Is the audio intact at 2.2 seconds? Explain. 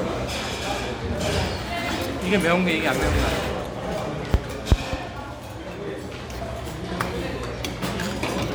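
Yes, the audio is intact at 2.2 seconds, with no dropout, click, distortion or other fault at that moment.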